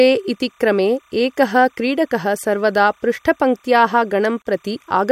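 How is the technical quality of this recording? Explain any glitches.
The recording has two technical faults: a faint timecode tone running under the whole clip, and one brief dropout near the end.

Timecode bleed runs throughout. Linear timecode at 29.97 frames per second has leaked from a neighbouring track or cable into the audio path. Its square wave flips between pitches near 1 kHz and 2 kHz, producing a steady, faint chirping warble roughly 40 dB below the speech.

A gap at a join of encoded pieces opens from 4.42 to 4.45 s, just after "क्रीडकः सर्वदा पृष्ठपङ्क्त्याः". Separately encoded segments were spliced without trimming the encoder's start delay and end-frame padding. The result is a 35 ms hole with smeared edges, after which the speech resumes where it stopped.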